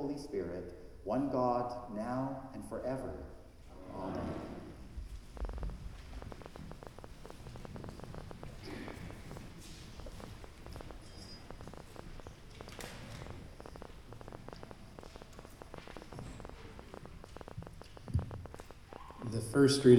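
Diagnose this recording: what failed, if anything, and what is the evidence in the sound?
A train of clicks runs from 5.37 s to the end at 19.98 s: sharp, similar-shaped ticks at about 8.8 per second, unevenly spaced, roughly a hundred and fifty in all, peaking around 10 dB above the sound and audible in quiet gaps too. The likely stage is the analogue wiring or interface, with interference injecting repeated pulses. On a waveform they show as thin spikes above the envelope. On a spectrogram they appear as full-band vertical lines at irregular intervals.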